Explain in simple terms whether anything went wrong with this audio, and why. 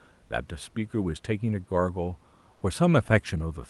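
Comfort noise in place of the background, 2.53 to 2.61 s: for 80 ms the real room noise turns into a smooth, featureless hiss at the same level. Likely the call codec stopped sending during the quiet moment, and the receiver filled the gap with synthetic noise.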